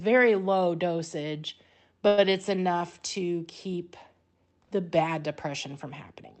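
From 2.07 to 2.33 s, just after "low dosage", the speech stalls in a call audio freeze. The last sound is stretched into a fading buzz for about 103 ms. Then "enough to keep" resumes intact but 103 ms late, likely because delayed packets drained the jitter buffer.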